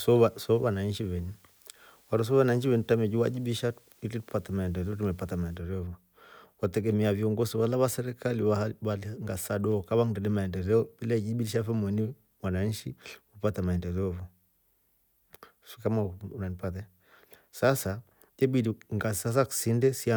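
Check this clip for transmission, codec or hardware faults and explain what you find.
One fault is present, confined to the opening of the clip.

From 0.0 to 5.57 s there is low bit depth with dither. The speech appears to be quantised to roughly 9 bits, with dither added before rounding, so the rounding error becomes a steady, even hiss around 35 dB below the speech rather than distortion.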